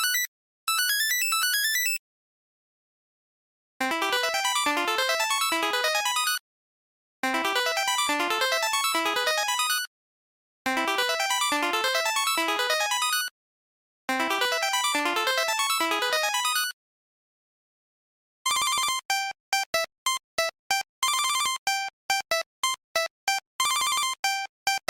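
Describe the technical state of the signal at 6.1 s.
At 6.1 s the signal is intact, with no audible fault at that point.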